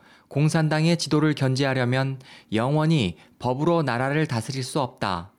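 Gain pumping throughout the speech: ducking about 5 dB under loud sounds, likely from a fast limiter taming excessive gain.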